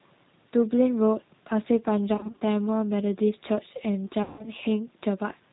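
A slightly rough, synthetic quality runs through the whole speech clip, with nothing audible above 4 kHz. This is the G.729 codec, which fits an 8 kbit/s stream: the decoder rebuilds each 10 ms frame from a vocal-tract filter, a pitch predictor and a few pulses, so fine detail is lost.

From 2.15 to 2.43 s the sound turns briefly stretched and thin in several short patches, then again from 4.23 to 4.48 s. This is VoIP packet loss concealed by the speech codec. Missing frames were filled by extending the last pitch and filter at falling gain. In the first span about 110 ms was missing, scattered over 260 ms with no gap longer than 30 ms. In the second, about 160 ms was missing.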